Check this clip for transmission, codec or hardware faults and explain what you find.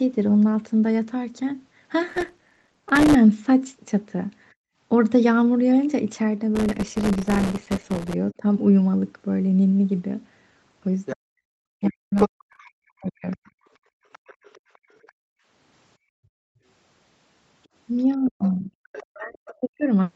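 Yes, there are four kinds of fault, all tied to processing on the sending device. The call path's 8 kHz ceiling is heard as a dull top end.

Processor overload crackle occurs from 2.09 to 3.15 s, 6.55 to 8.14 s and 12.18 to 12.56 s. The processor keeps missing short buffer deadlines, around 1.5 ms each. Each miss leaves a tiny silent gap. Many in a row sound like gritty crackle over the speech.

The background is gated by the echo canceller from 4.54 to 4.78 s, and again across 13.79 to 16.64 s. The canceller pulls the microphone down by about 40 dB while the loudspeaker plays. The room tone drops out, then returns.

Speech is suppressed in double talk at 8.37 to 8.45 s, with a dip of about 10 dB. It happens again from 11.13 to 13.5 s and from 18.05 to 19.88 s, dipping about 40 dB. Both sides were likely talking at once, so the canceller turned the speech down.

The other side's voice leaks through from 11.05 to 15.12 s, about 15 dB below the speech. 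It returns from 18.25 to 19.55 s, about 20 dB below. The canceller likely left residual loudspeaker echo in the microphone.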